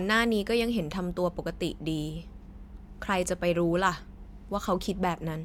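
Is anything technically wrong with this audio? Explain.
No, nothing technically wrong can be heard here.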